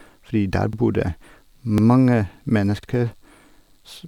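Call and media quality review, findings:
Overlapping chunks: brief stutter at 0.73–0.78 s, 1.78–1.83 s and 2.83–2.88 s, about 50 ms of audio replayed at each join. Chunking/stream assembly: 1.0 s chunks, each starting before the previous one ends. Regular 1.05 s spacing and repeated rather than missing audio rule out packet-loss dropouts.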